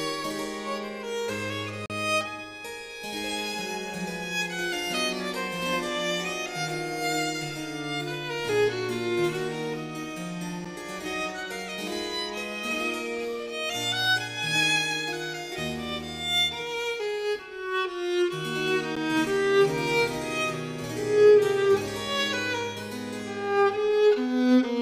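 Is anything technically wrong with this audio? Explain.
Yes. There are three blocks of digital silence, where the output dropped to zero with no fade. At 1.86 to 1.90 s, a 40 ms gap is heard as a short hole. At 10.65 s and 18.96 s, 10.7 ms gaps, which fit a 512-sample buffer, sound as ticks.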